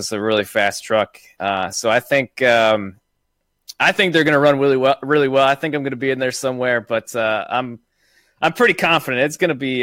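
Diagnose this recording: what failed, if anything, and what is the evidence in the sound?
Clock slip clicks at the converter stage, 0.13 to 9.80 s: a faint rattle of roughly twenty ticks per second. Likely unsynchronised clocks about 500 ppm apart, slipping single samples.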